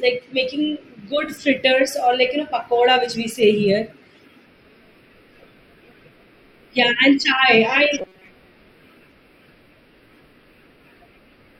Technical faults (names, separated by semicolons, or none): robotic sound from repeated short buffers